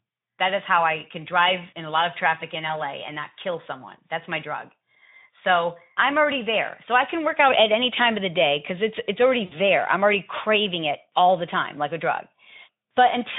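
A speech clip over a narrowband Speex link drops packets twice, and the speech codec's packet loss concealment fills each gap by extrapolating the last pitch and filter with falling gain. At 2.67 to 2.75 s a 20 ms loss leaves a brief stretched smear, and at 9.45 to 9.53 s a 60 ms loss stretches into a longer, fading blur before the speech recovers.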